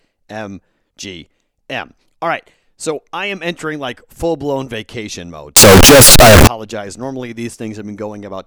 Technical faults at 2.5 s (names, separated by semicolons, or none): none